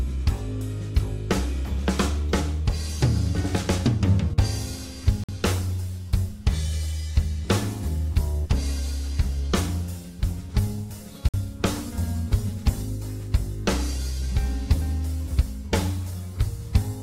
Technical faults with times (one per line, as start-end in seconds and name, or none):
5.24-5.29 gap between chunks
11.29-11.34 gap between chunks